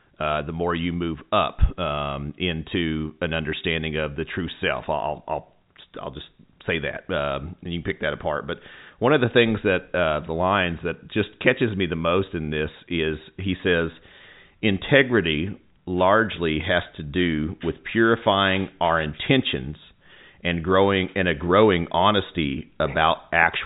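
No technical faults occur at any point in the speech, which carries the narrow band of G.711 A-law telephone coding with nothing above 3.8 kHz.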